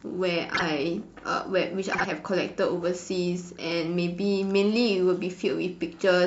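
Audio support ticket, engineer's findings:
Frames out of order: garbled flutter at 0.54–0.62 s and 1.93–2.06 s. Neighbouring blocks swapped, so each stretch plays halves reversed. The swapped blocks last 26.1 ms, then 52.2 ms, which fits one-frame then two-frame swaps. Likely packetiser or jitter buffer reordering. Nothing lost.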